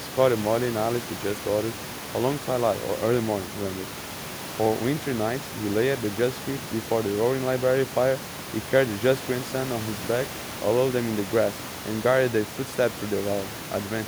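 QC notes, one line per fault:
Nothing to flag here, just a bit of room noise sitting about 14 dB under the speech, which belongs to the recording rather than anything the system did.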